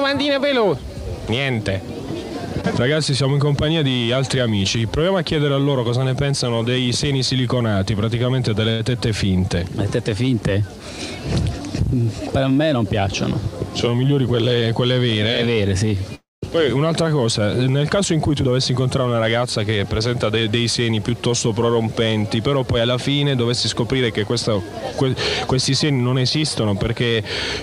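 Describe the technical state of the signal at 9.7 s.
At 9.7 s the signal is intact, with no dropout, distortion, clicks or other technical fault audible at that moment.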